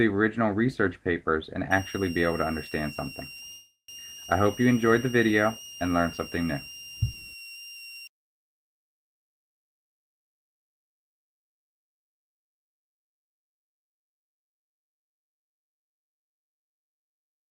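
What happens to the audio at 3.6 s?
At 3.6 s two things overlap. First, a call audio freeze runs from 3.51 to 3.91 s. The sound stalls, the last bit gets stretched into a fading buzz or hiss that drops into about 80 ms of silence, then picks up where it stopped. Nothing's lost, but it all arrives about 369 ms late, likely because packets were held up and the jitter buffer ran dry.

Underneath that, a switching supply whistle sits from 1.71 to 8.07 s: a thin high tone that drifts between about 2.74 and 2.87 kHz, roughly 20 dB below the audio. That's a switching power supply running in an audible burst mode or beating with another one.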